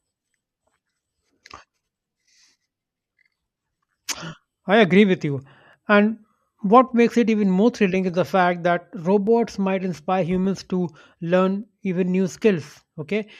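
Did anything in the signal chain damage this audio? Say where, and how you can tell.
Yes. The damage sits at the driver or buffer stage. In this speech, from 1.01 s to 12.81 s, a click recurs at a steady 1.18 s interval, about ten in all, with identical spacing regardless of what is being said. The likely cause is clock drift buffer slips: two devices running on independent clocks roughly 300 ppm apart. The buffer between them drifts until a block of around 15 samples is dropped or repeated.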